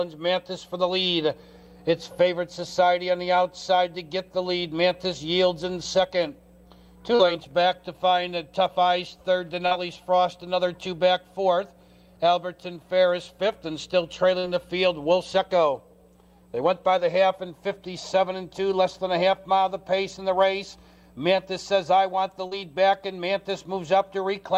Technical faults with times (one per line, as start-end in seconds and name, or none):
7.15-7.22 short concealed packet loss
9.67-9.74 short concealed packet loss
14.39-14.46 short concealed packet loss
22.47-22.54 short concealed packet loss